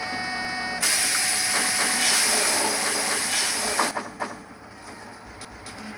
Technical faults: doubled audio track; overlapping chunks

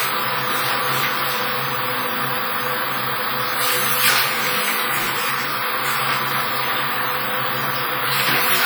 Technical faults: WMA compression

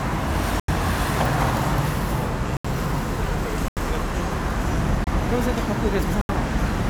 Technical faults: block of digital silence

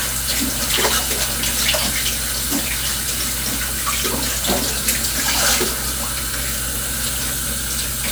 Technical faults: none

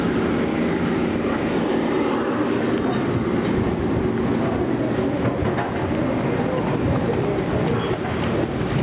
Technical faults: gain pumping

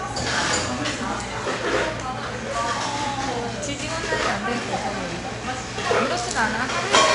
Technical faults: 4-bit ADPCM compression

